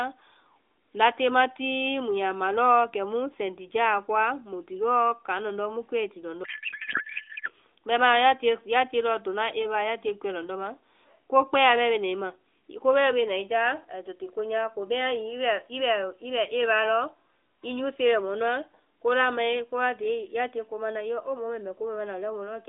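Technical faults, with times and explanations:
6.44–7.50 s, codec payload misread: right after "lɔndɔ́ mu kuɛi ti", the speech drops out for about a second and turns into garbled noise and warble that hardly follows the talker. The AMR frames are arriving in one packing layout and being unpacked as another, which fits octet-aligned frames read as bandwidth-efficient, so the decoder takes valid-looking bits from the wrong fields. It clears once both ends agree again, and the light AMR-NB sound of the 300 Hz–3.6 kHz line comes back.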